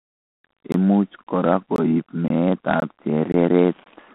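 Throughout, G.726 ADPCM coding confines the speech to roughly 200 Hz to 3.5 kHz, with nothing above 3.9 kHz. Its rasping hiss rises and falls with the speech, unlike steady background noise, and fits 24 kbit/s coding. A gap between chunks appears at 0.72, 1.24, 1.76, 2.28, 2.80, 3.32 and 3.84 s. Each is a hard-edged 20 ms silence at the join between 0.5 s chunks, and they recur every 0.52 s. Sound is paused rather than lost, which separates these gaps from dropouts.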